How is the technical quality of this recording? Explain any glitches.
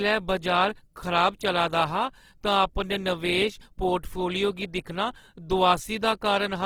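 The quality is noticeably degraded throughout by compression. The speech sounds grainy and rough, with a noisy sheen on tonal parts, which points to likely Opus compression at a low rate, around 16 kbps. The CELT coder keeps each band's energy but refills starved bands with folded or noise content. A spectrogram shows full bandwidth up to about 20.2 kHz, with fine harmonic detail smeared into speckled noise.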